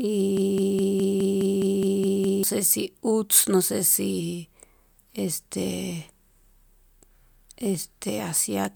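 From 0.37 s to 2.43 s, the same 0.21-second fragment of speech repeats ten times back to back, a stuttering broken-record loop. The likely cause is a stalled player or stream resending its last buffered piece, so the intended audio is lost.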